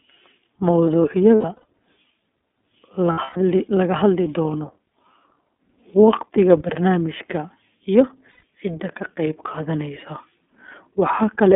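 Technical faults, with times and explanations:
Throughout: iLBC codec. The speech passes through a narrowband line of roughly 250 Hz to 3.5 kHz, so everything above that is gone and the low end is thin. At 13.33 kbps with 30 ms frames, each frame's excitation is coded on its own, which leaves the voice clear but plainly rough and somewhat synthetic.
1.35 to 1.64 s, 3.12 to 3.37 s and 8.31 to 8.43 s: lost iLBC frames. Packets went missing in each span: 180 ms scattered over 300 ms, then 180 ms over 240 ms ending just before "la hadli doono", then 120 ms before "cidda ka qayb". The decoder fills each gap by repeating the last pitch cycle mixed with noise, so it sounds like a held, buzzy vowel, with gaps of up to about 0.12 s. Because frames are independent, the voice is right again almost at once afterward.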